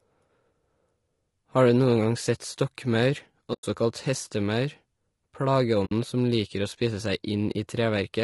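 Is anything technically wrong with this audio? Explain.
Yes. Two faults are audible in this speech.

Throughout, the speech has plainly audible damage consistent with low-delay AAC compression, likely AAC-ELD at a rate that fits about 32 kbps. Its short frames resolve the harmonics coarsely and leave few bits at this rate, so the speech sounds rough and grainy. On a spectrogram, the harmonic striations look smeared, with noise filling the gaps between them and a thinned, artificial-looking upper band.

AAC frame loss with muting occurs at 3.53 to 3.64 s, which fits about five lost frames, and at 5.85 to 5.92 s, which fits about three. The decoder zeroed the missing frames. Its overlapping windows then faded the speech out and back in, so each dropout is a soft-edged hole. The waveform shows a tapered dip to silence, and the spectrogram shows a blank vertical band across all frequencies.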